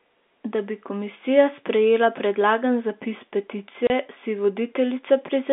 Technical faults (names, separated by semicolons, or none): packet loss filled with silence